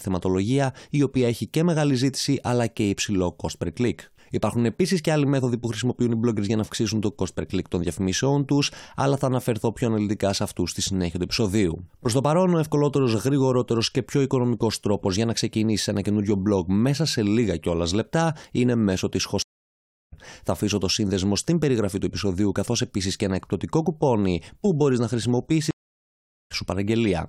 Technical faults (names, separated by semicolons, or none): stream reconnect